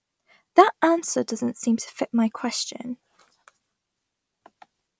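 No technical faults can be heard anywhere in this speech recording; the signal stays steady and intact throughout.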